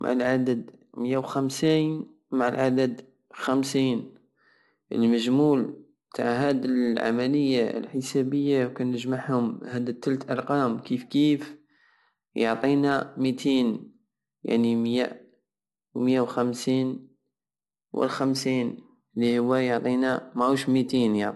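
Low-bitrate audio saved at a high bitrate, present throughout: the speech has nothing above 11.8 kHz and sounds dull at the top. The likely cause is an earlier low-bitrate encode whose losses and cut-off a later high-bitrate MP3 simply carried over.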